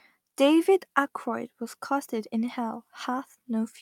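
Nothing in this recording trips up the ear, since the speech carries along with no dropouts, clicks, glitches or other faults to point to at any moment.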